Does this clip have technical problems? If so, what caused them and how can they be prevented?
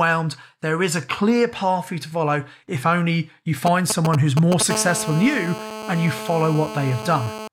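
Yes. GSM signalling bursts start right after "follow if only you" and run from 3.67 to 4.63 s. They form a galloping string of ticks and short 217 Hz buzzes, roughly as loud as the speech. A nearby 2G phone is exchanging brief radio bursts with the network, and the audio circuit rectifies them. Keep phones away from microphones and cables, or switch them to flight mode.

GSM phone buzz follows from 4.70 to 7.48 s. It is a steady, raspy 217 Hz buzz with many harmonics, about 10 dB below the speech. This is a phone in a call, transmitting 217 times a second, with each burst rectified into the audio path. Shielded cabling and distance from the phone prevent it.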